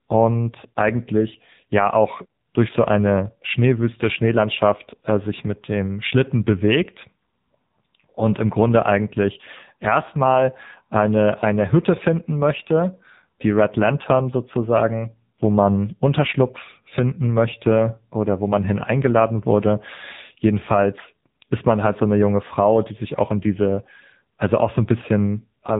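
Speech throughout, squeezed by the AMR narrowband mobile codec: nothing above 3.8 kHz, plus a buzzy, synthetic tone, heavy damage pointing to a low rate near 6.7 kbps, unlike a plain filter.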